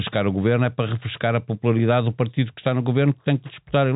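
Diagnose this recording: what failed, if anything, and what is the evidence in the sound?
Nothing has failed in this speech recording, and no stage of the chain shows a fault. The G.711 telephone coding is working as designed, so the audio is band-limited with nothing above about 3.8 kHz, and any quantisation noise it leaves is faint at most.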